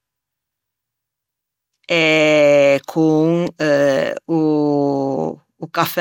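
Throughout, the speech sounds swirly and hollow, onsets blurred, nothing above 17.3 kHz; likely generation loss from roughly seven passes through an MP2-like codec.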